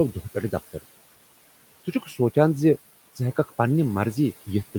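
Noise suppressor artifacts run through the whole of this speech recording. The suppressor pulls down the bands it treats as steady background by about 17 dB, so the room noise, sitting about 20 dB under the speech, dips in the gaps and comes back beneath the voice. Speech cut by the noise suppressor occurs between 1.85 and 2.17 s, where the suppressor mistakes part of the speech for noise and turns it down by as much as about 13 dB. Altogether around 150 ms of that stretch sounds swallowed and faint.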